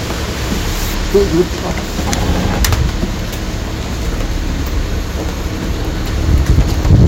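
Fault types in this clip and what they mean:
Hard clipping: the signal overloads a stage by about 10 dB, so its peaks are sliced flat. Those flattened tops add high harmonics. From 6.29 s to the end at 7.08 s, every loud moment turns into a harsh, gritty fuzz.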